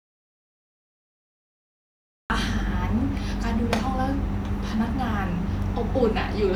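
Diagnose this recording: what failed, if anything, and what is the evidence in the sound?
Audio dropout to silence from the start until 2.3 s: silence with no room tone, then speech begins abruptly, likely a lost input link while recording continued.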